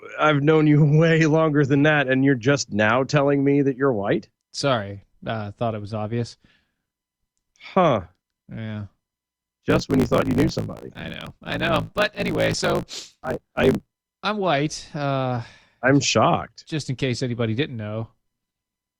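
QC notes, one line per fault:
9.69–13.92 s, block size mismatch (truncated): block tails are discarded, consistent with 1024-sample writes, giving a 54.4 Hz buzz and speech running 1.16 times fast at near-normal pitch until "I'm white". Spectrogram shows regular vertical seams; waveform shows splices every ~18 ms.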